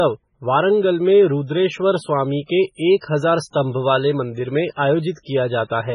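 MP3 compression, throughout the speech: the whole clip has the watery, swirling texture and abrupt treble ceiling likely left by heavy MP3 encoding at a very low bitrate, around 16 kbps. Starved of bits, the encoder discarded everything above 10.5 kHz and dropped quieter frequency lines, which flicker in and out between frames. That flickering gives the sound its bubbling, underwater quality, with metallic chirps on s sounds and smeared, softened attacks.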